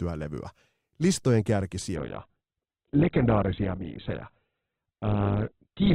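Adaptive stream dropping to a lower bitrate at 1.96 s: the speech abruptly loses everything above 4.2 kHz and turns thin through the end, consistent with a switch from about 64 to 8 kbit/s Opus.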